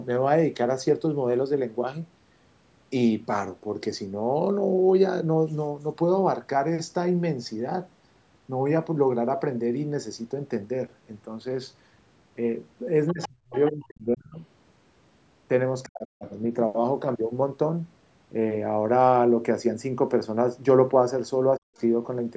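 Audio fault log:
13.08–13.28, 13.66–13.70 and 21.77–21.81 s, other side's voice leaking through: brief scraps of a second talker sit under the speech, about 15 dB down at 13 s and near 40 dB down at 21.8 s. The likely cause is an echo canceller missing part of the loudspeaker signal. Unlike crosstalk, these scraps come only when the far end speaks.
13.12–14.39, 15.85–16.26 and 21.57–21.76 s, speech suppressed in double talk: the main voice sinks sharply, by around 35 to 40 dB at its deepest, for about a second in the first stretch and shorter in the others. This is likely the canceller ducking both sides while they overlap. A dropout would cut out cleanly, but here the voice dips while the far side is playing.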